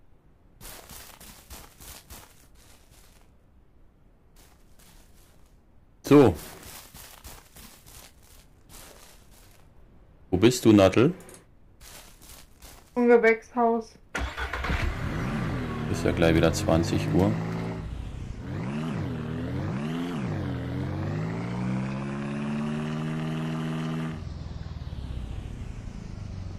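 Hard clipping hits the peaks in four bursts, at 6.11 to 6.29 s, 10.44 to 11.02 s, 13.11 to 13.29 s and 16.08 to 16.75 s. The level overran the stage by about 6 dB on the first two and about 3 dB on the last two, so the tops get sliced flat into a gritty, crackly edge.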